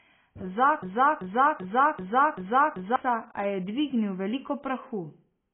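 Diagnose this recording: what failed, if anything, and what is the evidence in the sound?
Codec stage: the speech carries heavy AAC compression throughout, with nothing above 3.7 kHz, which points to a very low bitrate around 16 kbps. A spectrogram shows a flat ceiling at 3.7 kHz and patchy, holed bands beneath. The likely cause is AAC-LC quantising coarsely against its hearing model.

Playback or stream stage: from 0.83 s to 2.96 s a broken-record loop repeats one 0.39 s fragment six times back to back. The waveform shows identical blocks, and the spectrogram shows the same pattern repeating. This is likely a stall that resent the last buffer, and the intended audio is lost.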